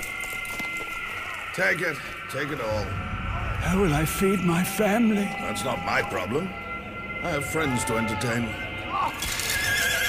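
Nothing in this clip stands out as a technical fault; it just runs along without any glitches, dropouts or other problems to point to.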